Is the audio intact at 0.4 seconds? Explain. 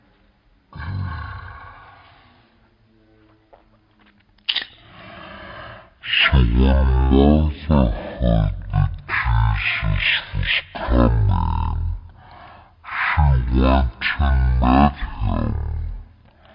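No. At 0.4 s, as throughout the clip, the speech is affected by a wrong sample rate. The samples are clocked out at one third of the rate they were captured at, with no resampling, which fits 48 kHz audio played back at 16 kHz. Timing and pitch shift together: everything runs at one third speed and sits about 19 semitones lower, so syllables are drawn out and the voice sounds deep and slow.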